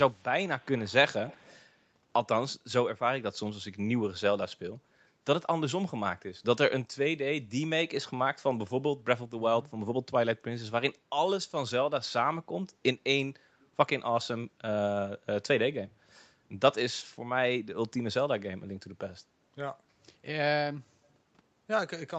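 Echo leak appears at 0.11 to 0.25 s, very faint, then stronger at 0.59 to 0.93 s and 1.1 to 1.67 s. It is a quiet copy of the speech arriving 182 ms late, likely residue a far-end echo canceller missed. Unlike room reverb, it is a distinct repeat rather than a smooth decay.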